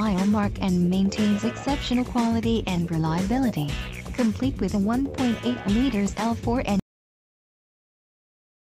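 At 6.80 s the audio just stops dead, a cut-off end. The final stretch of buffers never got written or played out, so the sound is chopped mid-event and drops straight to digital silence with no decay, staying silent for the last couple of seconds.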